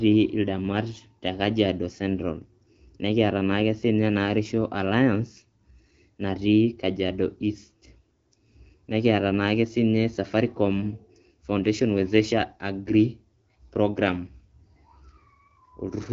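Nothing goes wrong anywhere in this speech, which simply sounds like a wideband phone call carried by the AMR-WB codec at 12.65 kbit/s, with nothing above 7.7 kHz.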